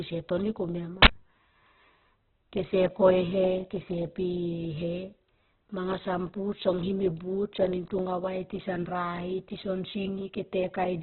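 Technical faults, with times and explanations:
Throughout, Opus compression: the speech sounds rough, grainy and band-limited, with nothing above 4.4 kHz. This is likely Opus at a very low rate, around 8 kbps in its music (CELT) mode. Bands the encoder can't afford are filled with folded or noise-like content, so harmonics smear into hiss instead of leaving gaps. On a spectrogram there is a hard ceiling at 4.4 kHz, with diffuse, speckled energy where clean harmonic stripes should be.
1.02–1.07 s, uninitialised buffer: just after "toni komia ma", a loud burst of digital noise lasting about 43 ms cuts in. Leftover memory was played as if it were sound because the buffer hadn't been filled yet. The length fits a 2048-sample block. On the waveform it is a dense rectangle with abrupt edges. On a spectrogram it shows as a bright vertical slab spanning the band up to the 4.4 kHz ceiling, possibly with thin horizontal lines from repeating values.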